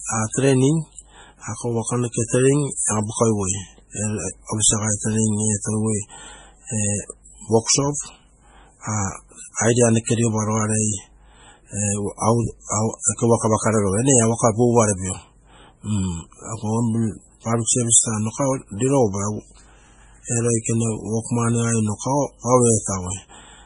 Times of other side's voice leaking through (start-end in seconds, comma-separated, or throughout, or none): none